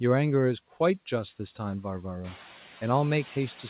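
Noise suppressor artifacts run through the whole clip: the suppressor pulls the steady background down by only about 4 dB, so the noise drops between phrases and swells back under them. On a spectrogram the noise floor pumps in patches, and the room noise rises by about 14 dB around 2 s, still some 20 dB below the speech. Nothing shows above 4 kHz, which fits a narrowband G.711 call path.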